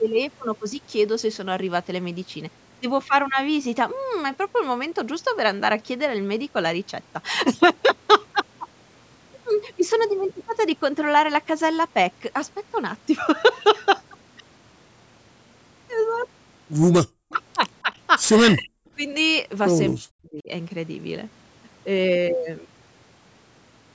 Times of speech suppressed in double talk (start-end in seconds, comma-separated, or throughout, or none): 17.05-17.16, 18.51-18.88, 19.95-20.49